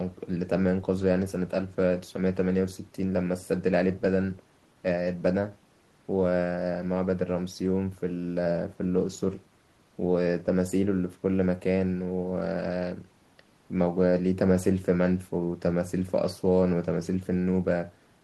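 Nothing goes wrong anywhere in this stretch of speech; there's no technical fault to point to at any moment, so there's no timeline of problems to walk through.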